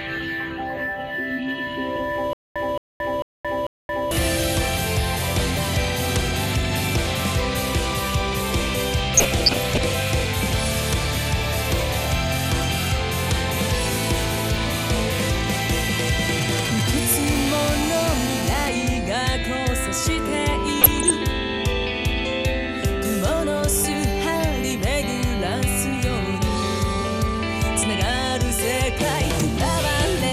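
The whole clip has a dull top end and a gurgling, granular roughness, with upper bands flickering in and out. That's MP2 compression, likely at a rate around 80 kbps, too few bits to keep the high sub-bands alive and the rest finely quantised.

From 2.33 to 4.11 s there's a stutter with silent gaps. A burst of about 220 ms repeats four times, each followed by roughly 224 ms of dead silence, so it cycles every 445 ms. That points to a player or stream that likely stalled and kept replaying its last fragment before running dry, and whatever should have played there is gone.

At 9.15 to 9.94 s comes DAB burbling, short blips of noise in single sub-bands. Bit errors at a fraction of a percent slipped past error correction and knocked individual sub-bands up and down in level for up to a frame. It returns more briefly at 20.80 to 21.11 s, at a similar error rate.

Between 16.42 and 17.29 s you get GSM signalling bursts, a galloping dit-dit-dit of short buzzes at about 217 Hz, roughly 10 dB below the programme. 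A nearby 2G phone was handshaking, and the audio circuit rectified its radio pulses.

Right after, from 17.30 to 18.69 s, that settles into steady GSM phone buzz, a hard, raspy 217 Hz tone full of harmonics at about 9 dB below the signal. The phone has gone into a call and is transmitting in bursts 217 times a second.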